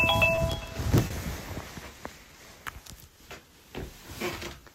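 Clock drift between sender and receiver runs through the whole recording of everyday sounds. The sending side's clock runs about 2 percent slow. The receiver's jitter buffer keeps draining, so the timing never settles. Small hiccups recur at uneven intervals.

A short stall from a late packet comes at 0.35 to 0.39 s, and another at 1.07 to 1.12 s. Each time a packet arrived late and the buffer ran empty. The last sound was held for 20 ms, then 30 ms. Nothing is lost. The sound briefly hangs, with a faint buzz or dip.

Repeated timing corrections follow from 2.19 to 4.68 s. The receiver keeps repeating short slices to match the slow sender, playing at 97 percent speed. In total they add roughly a tenth of a second. They come unevenly spaced, as slight stumbles and an unsteady pace.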